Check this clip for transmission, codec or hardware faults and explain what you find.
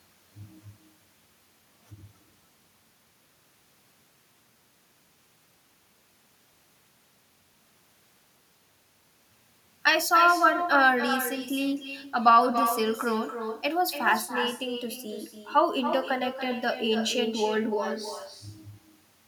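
One transmission fault runs through the whole speech clip: echo with no canceller. Throughout, each phrase returns roughly a third of a second later, about 8 dB quieter and thinner, because the far end's loudspeaker feeds its microphone and nothing removes it. Unlike room reverberation, which smears into a tail, this is a distinct delayed repeat.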